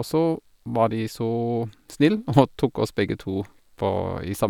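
Nothing in this recording stands out as a technical problem; the speech comes through without any dropouts, glitches or other faults to point at.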